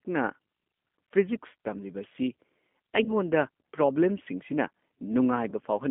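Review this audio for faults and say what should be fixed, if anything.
G.729 codec damage runs through the whole speech clip. The band sits between 200 Hz and 3.5 kHz, and the voice has the rough, slightly synthetic grain of a model that rebuilds speech from a vocal tract filter, a pitch predictor and a few pulses per frame. That sound fits an 8 kbit/s G.729A link. A plain telephone band-limit would keep the timbre natural, but here the grain itself is coded. To prevent it, send the call over a wideband codec such as G.722 or Opus, or raise the bitrate.

VoIP packet loss concealed by the speech codec occurs at 3.04–3.12 s and again at 5.50–5.54 s. Each time the decoder stretches its last pitch and filter into a fading sound, which fits about 20 ms of lost audio, roughly two 10 ms frames. The weakened sound at 3.04 s lingers past the gap because each new frame builds on the degraded state before it. 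A dropout with a hard cut or a click would stop dead and recover at once, but these ones smear and recover slowly. To prevent them, cut network loss with jitter buffering and QoS marking, or add forward error correction.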